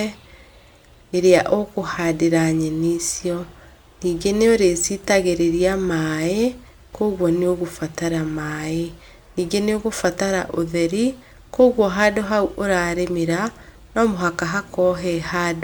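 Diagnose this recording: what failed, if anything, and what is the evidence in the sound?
Nothing stood out on listening to this speech recording, and no failure could be pinned to any stage of the chain.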